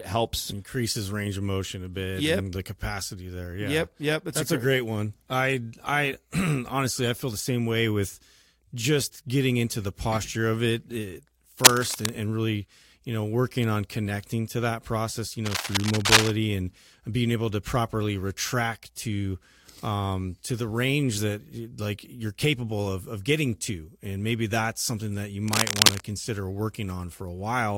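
Three bursts of cable scratch noise break into the speech, from 11.64 to 12.18 s, 15.46 to 16.30 s and 25.48 to 26.05 s. Each is a dense, ragged rustle sitting a little above the level of the speech, most likely from a worn cable or connector whose contact resistance jumps about as it is moved. On a spectrogram each shows as an irregular broadband smear; the waveform carries jagged, uneven spikes riding over the signal.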